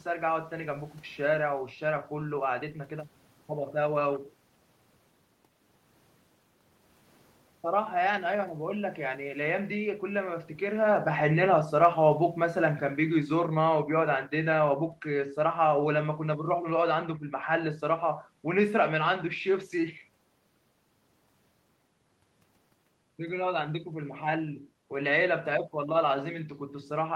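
From 10.68 s to 19.2 s the whole recording sinks steadily, ending about 8 dB quieter, and the room noise drops right along with the speech rather than holding its level. That shared fall marks it as automatic gain falling: the automatic gain control judged the input too loud or its background noise too strong and eased its gain down over those eight and a half seconds. It begins just after the talker shifts position at the microphone, around 10.5 s.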